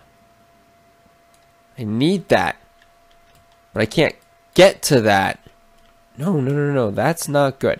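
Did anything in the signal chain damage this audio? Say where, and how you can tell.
Yes, there's a loose connector crackle in the analogue wiring, from 3.85 to 3.97 s. For about a tenth of a second you get an irregular burst of scratchy crackle rather than a clean click, and that's the giveaway. A worn or dirty contact is making and breaking as it shifts, so the signal gets chopped on and off in quick ragged bursts, with pops wherever the line carries some DC.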